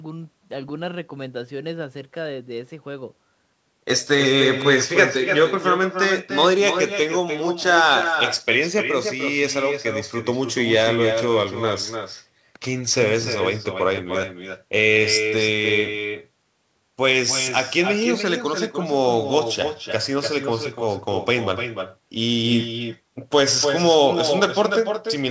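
Throughout the speech, an echo with no canceller returns each phrase about a third of a second later, roughly 7 dB quieter, showing as weaker delayed copies trailing every spectrogram burst. Nothing appears above 8 kHz, consistent with a wideband call codec.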